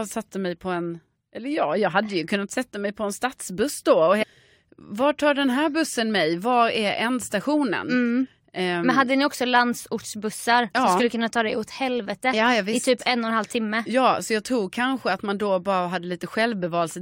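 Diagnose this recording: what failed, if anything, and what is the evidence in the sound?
At 4.22 to 4.24 s the speech jumps forward abruptly with a brief blip, and the flow of the sentence breaks as if a stretch were removed. This is likely a stream segment skipped at the network/playback stage, where one segment failed to load and the player continued with the next.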